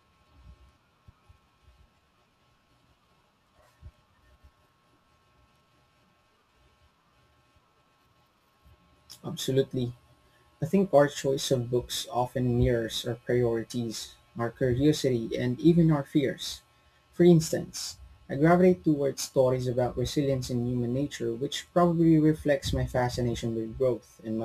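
A gritty, inharmonic fizz rides on this speech recording from start to finish, sitting roughly 30 dB below the voice and growing on louder and brighter sounds. It points to crude rate conversion, a nearest-sample conversion from 48 kHz to 44.1 kHz that dropped samples without filtering.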